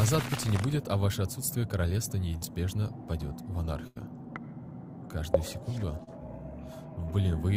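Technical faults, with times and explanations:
2.37 to 2.43 s and 6.04 to 6.09 s, short concealed packet loss: about 40 ms of audio went missing each time because packets failed to reach the decoder in time. The receiver covered the holes by extending the preceding sound, roughly 37 ms and 33 ms of synthesised fill, then crossfaded back into the real signal. The result is a brief smear or wobble at each point, with a sliver of the original sound absent.
3.87 to 3.98 s, burst of packet loss: a longer run of packets was lost or arrived too late, leaving about 84 ms for the receiver to fill while about 80 ms of the real audio never arrived. Concealment carried the last sound forward and turned it down as the gap continued. Depending on that sound, the gap comes across as a held buzz or a fading hiss. Playback then resumes slightly further on, with the missing stretch skipped.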